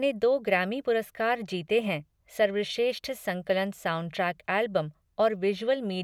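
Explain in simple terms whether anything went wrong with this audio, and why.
Nothing went wrong here: the recording reaches the listener in a steady, intact state, with no interruptions, distortion, or other technical problems anywhere in the speech.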